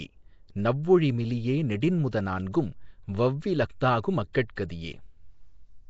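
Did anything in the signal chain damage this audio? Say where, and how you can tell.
Yes. The damage happened at the codec stage. Throughout the speech, nothing is present above 7.7 kHz, and the codec damage is plainly audible: a rough, hissy halo sits around the speech and the whole clip has a smeared, underwater quality. That sound is likely Nellymoser compression, the Flash-era Nellymoser Asao codec at a rate around 32 kbps. Its fixed, coarse bit budget starves weak bands, which are then filled with noise.

The same transform coding also leaves pre-echo at 4.33 s, just after "னான்கும் வவ்வி லஃதாகு", and again at 4.56 s. Each time, about 14 ms of hiss arrives before a sharp onset, and the attack itself sounds softened. This happens because the codec spreads quantisation noise across its whole block. When an attack lands late in a block, noise sized for the loud part also fills the quiet moment before it.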